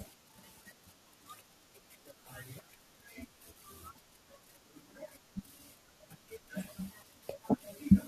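At 1.13, 2.58, 3.95 and 7.02 s the speech is broken by short glitches from damaged data in a compressed stream. Corrupted bytes make the decoder misread frames and lose sync. Each shows as a thin broadband vertical streak on a spectrogram and a brief jagged glitch in the waveform.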